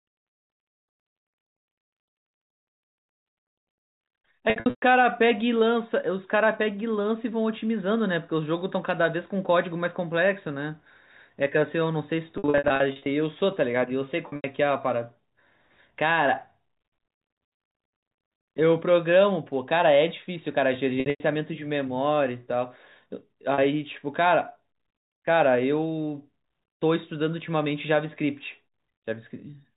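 Packet loss with pitch repetition hits at 4.5 s, 12.38 s, 14.28 s, 21.0 s and 23.54 s. The receiver repeats the last pitch period to fill each gap. Short gaps sound held and buzzy. Runs up to 120 ms fade toward silence.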